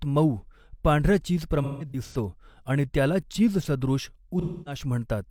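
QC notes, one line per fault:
1.63–2.17 s, AAC frame loss with concealment: smeared, noisy patches as scattered gaps totalling 0.3 s, the longest around 150 ms, are filled from the last good spectrum.
4.41–4.81 s, AAC frame loss with concealment: a similar smeared, noisy stretch where 0.26 s of missing audio is rebuilt by the decoder from the preceding spectrum.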